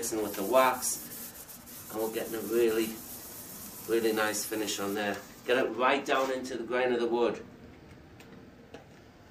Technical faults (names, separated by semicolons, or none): channel delay (comb filtering)